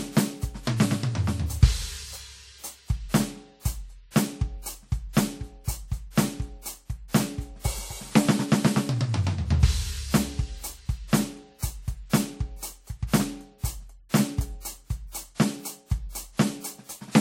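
Throughout, the music carries two layers of smeared, swirly codec artefacts, likely transcoding between lossy codecs (MP3 then WMA). A spectrogram shows nothing above 16.5 kHz.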